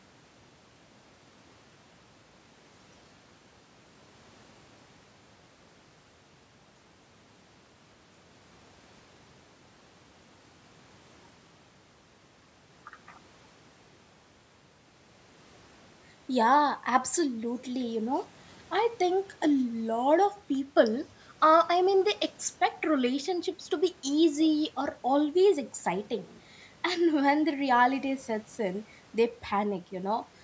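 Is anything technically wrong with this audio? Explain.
No, nothing is technically wrong.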